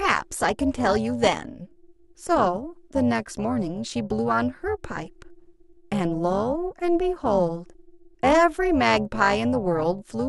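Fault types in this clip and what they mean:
overlap-add ripple: frames rejoined with mismatched overlap gain, so speech level swings about 11 dB around 300 times a second, a metallic buzz with extra tones around the voice.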